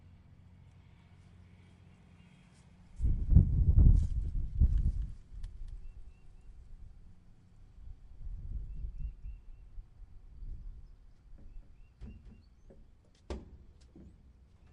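A slower second capture path likely creates a doubled audio track from 4.67 to 12.43 s: a dry copy, about 5 dB down, trails roughly 200 ms behind.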